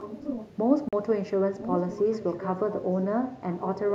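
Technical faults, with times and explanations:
0.00–0.54 s, 1.61–2.49 s and 2.79–2.84 s, echo leak: a delayed copy of the speech sits under the direct signal, trailing it by about 1.01 s. It is about 10 dB below the speech in the first stretch, rises to about 5 dB below in the second, and drops to about 15 dB below in the brief third. The likely cause is a far-end loudspeaker whose echo canceller let part of its microphone pickup return down the line.
0.89–0.93 s, Bluetooth dropout: the audio cuts out for about 41 ms and resumes as though it had kept playing, so that stretch of sound is simply missing. The gap points to two consecutive audio packets that likely failed to reach the headphones in time and were discarded, leaving the output silent until the next valid packet arrived.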